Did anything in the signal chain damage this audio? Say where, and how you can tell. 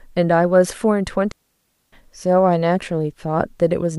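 Yes. From 1.32 s to 1.93 s the speech drops into a clean hole of near silence lasting about 0.61 s, with no crackle, hiss or burst of noise at either edge, just a very quick fade out and back in. That points to a digital wireless dropout on the radio link between transmitter and receiver: too much data was lost over the air, so the receiver muted its output instead of passing on corrupted audio.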